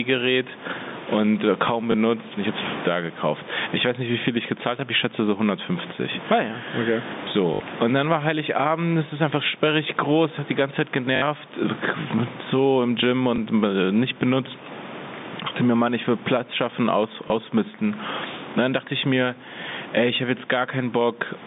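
Gain pumping runs through the whole speech clip. The level swings by around 15 dB, which squeezes loud and quiet passages together. The likely cause is input gain set far too high, with a fast limiter repeatedly pulling the level down.

Packet loss with the last packet repeated occurs five times. At 1.92 to 1.94 s a single 20 ms repeat gives a small blip. At 7.54 to 7.60 s, between "ja okay" and "und dann war", and again at 11.16 to 11.22 s, the repeats run for 60 ms. Each produces a buzzy, robotic stutter at 50 Hz, consistent with 20 ms packets looped until new audio arrived. Shorter single-packet repeats give small blips at 13.36 s, just before "äh nicht benutzt", and at 17.28 s, just after "schaffen aus".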